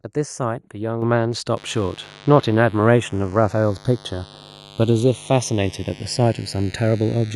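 A slow flanging sweep runs through the whole recording, its comb notches gliding gradually across the spectrum when the two sides are summed to mono. This is the channels drifting apart: the left and right signals were captured on separately clocked devices, mismatched by roughly 100 parts per million, so the delay between them creeps to around half a millisecond by the end.

At 1.02 s the speech and its background jump up together by about 6 dB in a single step. This is the microphone volume stepped up: the call software judged the input too quiet and raised the device's capture level abruptly, mid-stream, rather than easing it in.

From 1.57 s to the end a steady, raspy buzz sits beneath the speech, roughly 25 dB below it. This is mains buzz at 50 Hz: sharp switching spikes, occurring twice per mains cycle, leak in from a dimmer, rectifier or unshielded lead, spreading harmonics up into the kHz range.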